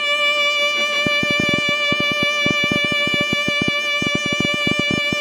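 Right from the start the music has that ringing, washy quality you get from WMA compression, most likely a low-bitrate encode, something around 48 kbps. The codec's long transform blocks smear quantisation noise over tens of milliseconds, so there's a hiss that swells and fades with the music. Quieter detail gets thrown away, and the damage is plainly audible the whole way through. Content stops at 19.9 kHz.

At 1.07 s a train of clicks starts and runs until 5.14 s. You get roughly forty similar-shaped pops at about 10.1 per second, spaced unevenly, with the loudest sitting roughly 15 dB above the music. That ragged ticking is likely something injecting pulses into the signal path, such as interference from nearby gear or a faulty connection or power supply.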